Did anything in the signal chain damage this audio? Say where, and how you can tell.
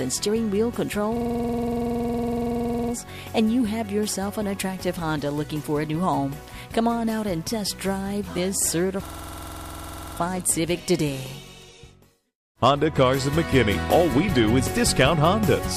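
Yes, at the driver or buffer stage. From 1.16 to 2.93 s, and again from 9.06 to 10.17 s, one 46 ms fragment repeats dozens of times, producing a rattling stutter at about 21.5 Hz. This is a system hang loop: the host or driver stalled, and the audio hardware kept replaying the same ring buffer, whose length fits a 2048-sample buffer. Once the system resumed, the sound picked up with little or nothing missing.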